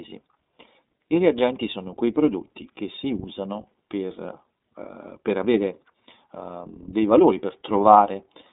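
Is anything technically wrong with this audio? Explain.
Yes. Throughout the speech, an iLBC codec coded each frame's excitation independently at a low rate, with 30 ms frames at about 13 kbit/s. The band stops near 3.7 kHz and below 200 Hz, so the voice sounds narrow, a little rough and synthetic.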